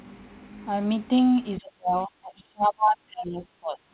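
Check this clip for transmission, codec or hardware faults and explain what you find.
One fault stands out: speech suppressed in double talk, running from 1.6 s to the end of the clip. The sound is carried over a narrowband call path with no energy above 4 kHz, consistent with 64 kbps G.711 mu-law.

From 1.6 s the speech sinks, thins and breaks into fragments, reaching roughly 30 dB below its earlier level. The likely cause is the echo canceller failing to tell the near talker apart from loudspeaker echo while both sides spoke, so it attenuated everything. On a waveform the envelope collapses into ragged, shrunken bursts. On a spectrogram the bands fade and break into patchy islands, with the upper frequencies thinning out.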